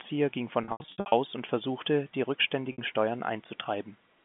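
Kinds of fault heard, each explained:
Packet loss with pitch repetition: pieces of the stream never arrived, and the receiver filled each hole by looping the last pitch cycle and fading it down. Between 0.64 and 1.12 s about 320 ms is lost in scattered runs of up to 80 ms, heard as held, buzzy stutters within the narrow telephone band. A single 60 ms gap follows at 2.72 s. Spectrograms show frozen, evenly spaced harmonics, and waveforms show identical repeating cycles that taper away.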